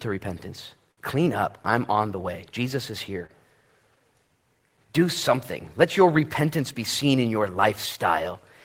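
Speech with two short stalls from a late packet: at 0.91–1.00 s and just after "is here" at 3.26–3.32 s, sound gets held 60 ms and 25 ms while the jitter buffer waits.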